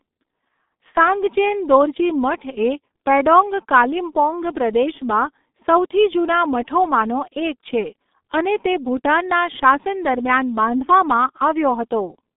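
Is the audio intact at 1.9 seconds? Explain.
No. At 1.9 seconds, as throughout the speech, the G.723.1 codec is at work: heavy low-rate coding, consistent with about 6.3 kbit/s, with 30 ms frames that smear consonants and leave a muffled, hoarse tone. A spectrogram shows energy confined to roughly 200 Hz–3.7 kHz, empty above 3.8 kHz.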